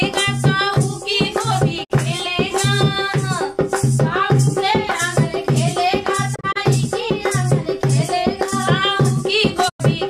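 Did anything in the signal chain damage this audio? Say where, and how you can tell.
Yes, a digital broadcast dropout at the reception stage. The receiver lost good frames and muted until valid data returned, so the audio fades out over about 20 ms and goes silent. This happens at 1.83 to 1.92 s (48 ms missing), and at 9.68 to 9.81 s (96 ms). Between 6.34 and 6.57 s, 72 ms drops out as several short holes, none longer than 24 ms, which fits whole frames of that length failing. The programme content from those gaps is lost.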